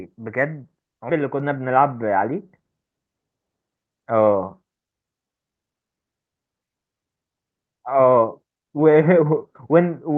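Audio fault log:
1.1 s: skip ahead. About 1.5 s of audio dropped with no fill, so the sound jumps forward; the waveform shows an abrupt splice with no gap.
1.21–3.14 s: jitter buffer speed-up. Short pitch-period pieces removed repeatedly, roughly 0.2 s in total, so speech runs about 9% faster at unchanged pitch; the spectrogram shows the same harmonics with compressed timing.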